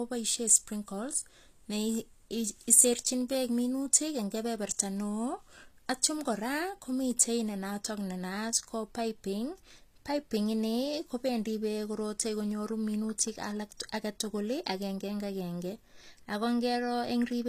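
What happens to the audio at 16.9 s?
At 16.9 s, as across the whole clip, the speech carries plainly audible HE-AAC compression damage, likely from an HE-AAC encode at a low rate that fits about 24 kbps. The upper band is not the original. It is rebuilt by copying lower bands upward under a coarse envelope, so s sounds come out gritty, metallic or lispy, and nothing remains above 14.9 kHz. Plain low-bitrate AAC or MP3 would sound dull and muffled, with swirly artefacts. Here the treble stays bright but synthetic, with harmonics that don't line up across the crossover.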